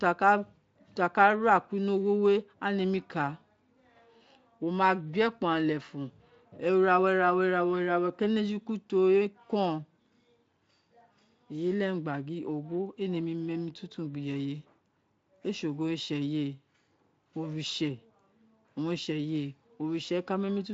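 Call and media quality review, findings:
Nothing stood out on listening to this speech clip carried over the Speex path.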